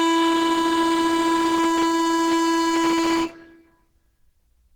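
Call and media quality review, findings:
Music rough, grainy, hoarse throughout. Likely Opus compression. Hybrid speech mode, fitting roughly 16 kbps. Starved bands noise-filled. Full bandwidth kept.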